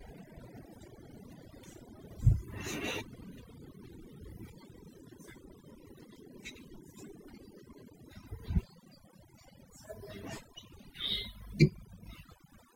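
From start to finish the speech carries overdone noise removal: a denoiser set far too aggressively clamps individual frequency bands down whenever they sit near its noise estimate, and the softer parts of the voice are caught along with the noise. Between phrases the background drops to near silence dotted with twinkling specks. A noise gate instead mutes the whole signal at once, without that scattered sparkle.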